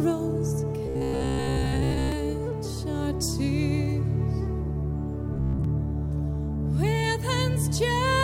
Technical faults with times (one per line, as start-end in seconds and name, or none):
0.86-2.12 robotic sound from repeated short buffers
5.34-5.64 robotic sound from repeated short buffers